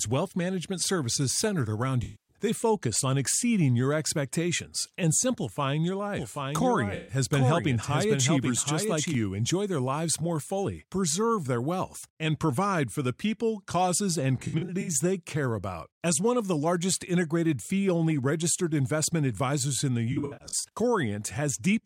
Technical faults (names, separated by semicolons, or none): AAC frame loss with concealment; doubled audio track